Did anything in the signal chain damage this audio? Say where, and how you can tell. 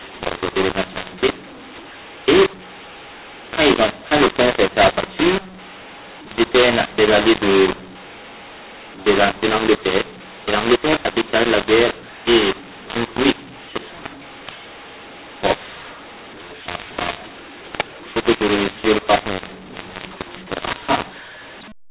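Yes. The damage is at the codec decode stage: a mu-law and A-law mix-up, with speech coded as G.711 A-law but decoded as mu-law for the whole clip. The wrong expansion curve scrambles levels, so the speech sounds harsh and distorted and pauses fill with noise as the quietest samples are lifted.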